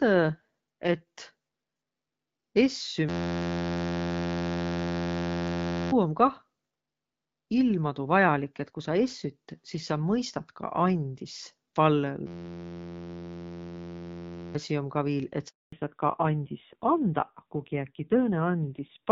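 From 3.09 to 5.92 s and again from 12.27 to 14.55 s, a system hang loop replays one 11.61 ms slice of audio at 86.1 Hz. This produces a steady buzz, consistent with a stalled driver cycling a 512-sample ring buffer. Roughly three and then two seconds of speech are lost before "om kah" and "asi um ka viil" resume. After "um ka viil et", a handover gap silences the call for 240 ms, from 15.48 to 15.72 s, as the network switch delivers no frames. From 15.72 s onward, the call falls back to narrowband, dropping from AMR-WB at 12.65 kbit/s to AMR-NB at 5.9 kbit/s. Nothing above 4 kHz remains, so the speech turns duller and rougher than the lightly coded wideband section before it.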